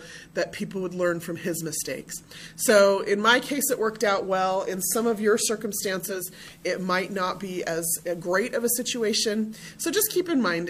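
At 5.98 s the audio shows digital radio blending to analogue, cross-fading over about 0.44 s to the station's FM broadcast, then returning at 9.68 s. During that span the level drops by about 1 dB and hiss appears roughly 35 dB below the signal, visible on a spectrogram as a faint broadband noise floor between those times.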